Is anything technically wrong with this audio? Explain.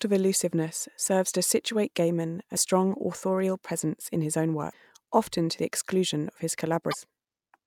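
Yes. Three short glitches break into the speech at 2.53–2.57 s, 4.69–4.73 s and 6.90–6.94 s, each a brief chirp or blip lasting about 40 ms. This is damaged data in a compressed stream: some of the encoded bytes at those points were lost or corrupted, so the decoder misread those frames, briefly lost sync, and produced garbage until it locked onto the next valid frame header.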